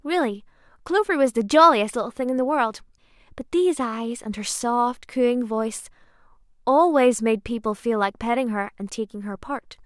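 A speech recording, with nothing technically wrong with it.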